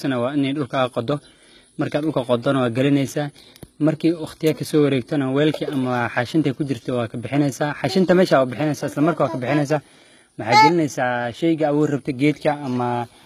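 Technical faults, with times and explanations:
Throughout: HE-AAC compression. The speech's treble sounds rebuilt, not recorded. Upper bands are copied up from lower ones and shaped by a coarse envelope. Harmonics do not line up above the crossover. The damage is plainly audible, likely from a very low bitrate near 20 kbps.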